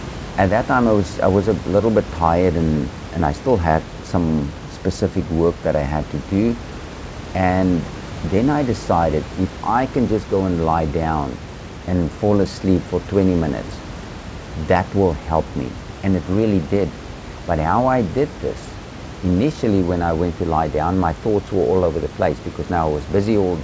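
No technical faults can be heard in this recording.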